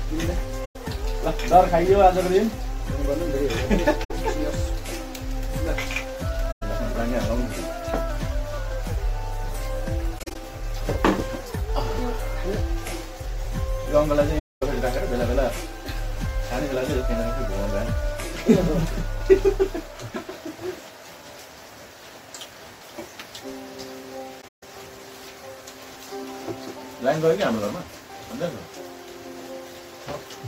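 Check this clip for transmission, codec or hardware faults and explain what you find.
AAC frame loss with muting occurs six times, at 0.65, 4.04, 6.51, 10.18, 14.38 and 24.41 s. Lost frames were decoded as silence, and overlapping windows fade the sound out and back in, leaving soft-edged gaps.

The gaps last about 107 ms at 0.65 s, 64 ms at 4.04 s, 107 ms at 6.51 s and 235 ms at 14.38 s. At 10.18 s, about 107 ms goes missing in short pieces spread over about 170 ms, the longest around 40 ms. At 24.41 s, about 170 ms drops out over about 210 ms, mostly as one hole of roughly 150 ms.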